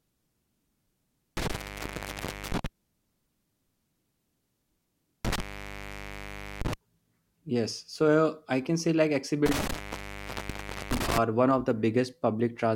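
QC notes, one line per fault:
1.37–2.66 s, 5.25–6.74 s, 9.46–11.18 s: intermittent contact. The speech cuts out three times, for about 1.0 s, 1.2 s and 1.2 s, as a loose plug or cable opens the signal path. Crackle marks each break and reconnection, and faint hiss remains while the line is open.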